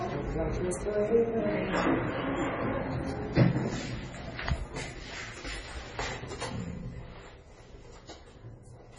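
Everyday sound recording with heavy MP3 compression throughout: nothing above 10.5 kHz, and weak detail swirls watery as it drops in and out frame to frame, likely from a very low bitrate around 24 kbps. That swirl distinguishes it from a simple low-pass filter.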